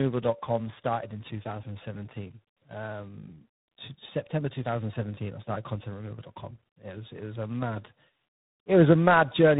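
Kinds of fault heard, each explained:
Tandem speech coding, throughout: the speech has passed through three speech coders in a row, each re-encoding the already degraded output of the one before. The sound points to an ADPCM stage like G.726, then a low-rate iLBC-style coder, then ADPCM again at a coarser rate. The errors stack, so the speech is rough and warbly, and it is muffled, with nothing above about 3.8 kHz.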